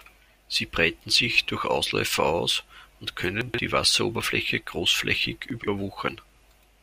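A speech clip in which audio chunks were delivered out of order: one chunk of about 43 ms arrived three chunks late and played after its successors. The result is a short jumbled stretch with hard joins, at 3.41 to 3.58 s just after "aus und" and again at 5.50 to 5.68 s.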